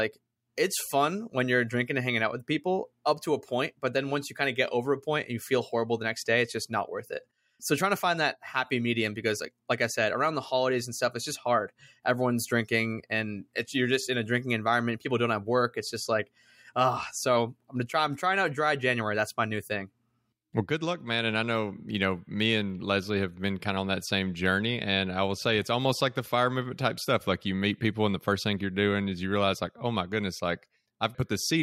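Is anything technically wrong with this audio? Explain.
No, nothing technically wrong can be heard in this speech recording. The audio stays steady and intact throughout, with nothing in the signal chain drawing attention to itself.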